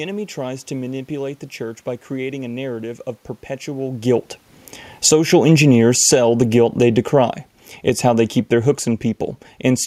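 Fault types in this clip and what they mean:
Automatic gain falling: the gain control judged the input too loud or its background noise too strong and pulled its level down, about 7 dB from 4.91 to 5.26 s and about 5 dB from 5.96 to 8.84 s. Unlike a talker moving away, the room background sinks with the speech.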